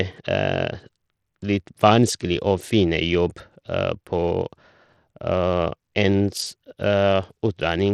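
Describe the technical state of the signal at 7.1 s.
At 7.1 s the speech carries the same damage heard across the whole clip: thin, flickering treble and a gritty noise with aliasing riding on it. This is likely Bluetooth SBC compression, its coarse sub-band quantisation starving the top bands, which fits a low bitrate of around 80 kbps.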